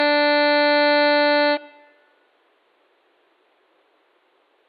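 Throughout this music the sound is swirly, smeared and hollow, with blurred attacks, more degraded than a single 128 kbit/s MP2 encode would suggest. This is generation loss, likely from around seven successive decode-and-re-encode passes, each requantising on a shifted frame grid so noise and spectral gaps accumulate.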